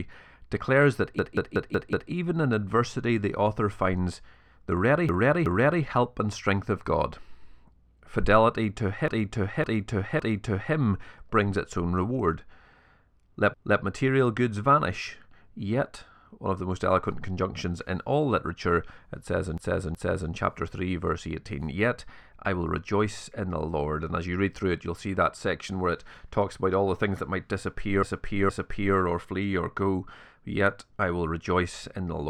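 Speech with repeated frames: a stretch of compressed audio is decoded again. This happens at 1.19, 5.09, 9.08, 13.54, 19.58 and 28.03 s, with blocks of 186 to 557 ms. Exact replays that lengthen the audio distinguish it from dropouts.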